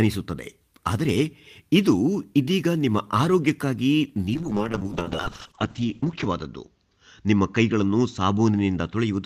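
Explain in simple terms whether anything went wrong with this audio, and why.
From 4.35 s to the end, the speech suffers a call bitrate drop. The connection's estimated capacity fell, so the encoder got far fewer bits. Sound above 8 kHz is cut, leaving it muffled and rough, worst for about two seconds, with no recovery.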